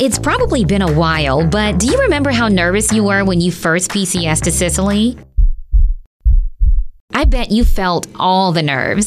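Nothing stood out on listening; no technical fault could be heard at any point in the audio.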